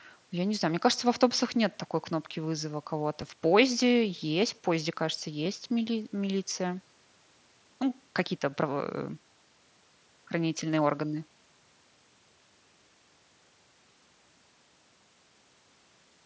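At 3.21 s and 5.45 s, concealed Bluetooth headset packet loss: a gap of about 7.5 ms, consistent with a single lost packet, was filled by repeating recent waveform. Each is nearly hidden, seen as a tiny periodic patch on the waveform and a faint vertical seam on the spectrogram.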